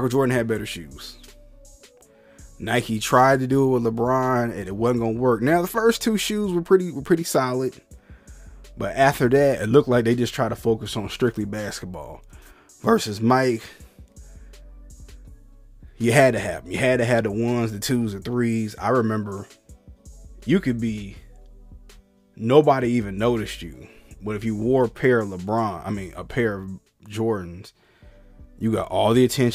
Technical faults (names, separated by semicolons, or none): none